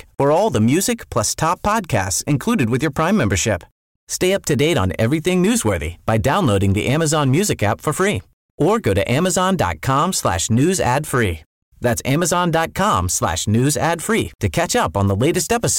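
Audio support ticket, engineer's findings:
Hard clipping, throughout: speech peaks driven about 6 dB past a gain stage's ceiling and cut flat, a small share of samples, giving crackle on loud syllables.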